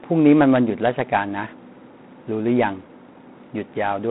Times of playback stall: none

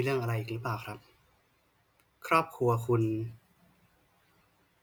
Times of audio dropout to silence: none

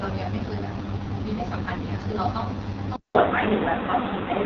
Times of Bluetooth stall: none

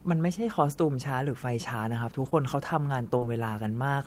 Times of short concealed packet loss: 2.29-2.33, 3.17-3.23

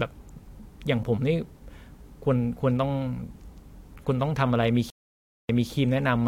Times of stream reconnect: 4.90-5.71

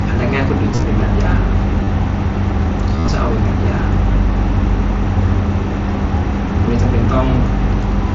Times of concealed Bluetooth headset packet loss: 0.75-0.83, 1.84-1.87, 2.96-3.08, 4.13

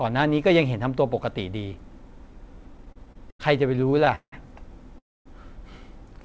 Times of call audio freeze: 4.98-5.27

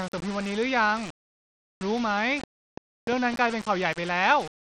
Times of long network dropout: none

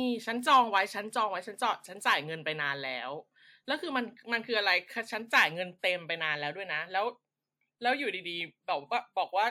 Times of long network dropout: none

